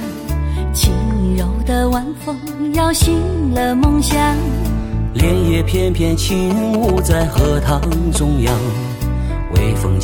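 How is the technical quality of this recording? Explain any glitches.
The recording has one clear glitch: GSM signalling bursts from about 6.50 s to 8.17 s. A nearby 2G phone exchanging control traffic emits short radio bursts that the audio circuitry rectifies, producing a galloping dit-dit-dit of short buzzes at about 217 Hz, only a few decibels below the wanted sound.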